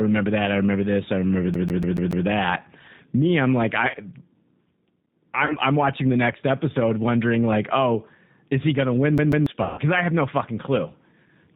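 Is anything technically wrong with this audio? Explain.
Yes. The whole clip is speech carried over a G.729 codec, and it has two kinds of timed fault on top.

G.729 codec: throughout, nothing above 4 kHz survives, and the speech sounds rough and synthetic, which fits an 8 kbit/s codec rebuilding the voice from a filter, pitch predictor and a few pulses per frame. Unlike the timed faults, this colouring never lets up.

CD stuck on one turn: from 1.54 to 2.26 s, the same 0.14 s slice plays five times, and from 9.18 to 9.47 s twice, each jump marked by a brief mute. A scratch sends the laser back one track on every rotation. The repeats are exact copies at an even rate, which separates this from packet loss.

VoIP packet loss concealed by the speech codec: at 3.89 to 3.96 s and 5.45 to 5.55 s, about 40 ms of audio is missing, fitting two 20 ms packets each. From 9.63 to 9.80 s the gap is about 140 ms. 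The decoder stretches its last pitch and filter with falling gain, so these spots turn into a fading buzzy tone or coloured noise that stays weak afterwards, never a clean repeat.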